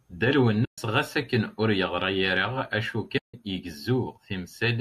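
At 0.65 to 0.78 s and again at 3.18 to 3.34 s the speech drops into silence, from AAC frame loss with muting. The gaps of 130 and 160 ms fit runs of lost 10 ms frames whose spectrum the decoder zeroed. The overlapping windows fade each hole out and back in. The short frames point to low-delay AAC compression, likely AAC-ELD.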